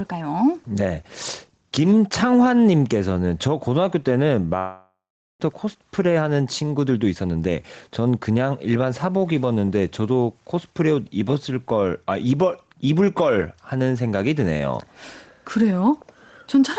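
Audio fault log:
throughout: gain pumping. The level swings up and down with the loud parts of the speech, a swing of around 5 dB. The likely cause is input gain set too high, with a fast limiter pulling the level down on every peak, flattening the dynamics.
4.58–5.41 s: long network dropout. The speech breaks into a fading buzz or hiss continuing the last sound, then about 0.4 s of near silence, and resumes with roughly half a second of audio missing. This points to a likely gap in packet arrival, bridged by concealment until real audio returned.
5.50–8.37 s: jitter buffer speed-up. The speech runs about 11% fast at unchanged pitch and sounds hurried. After the dropout the buffer held excess delay, around 0.3 s, and the receiver trimmed it by repeatedly cutting short pitch-period-length pieces from the stream.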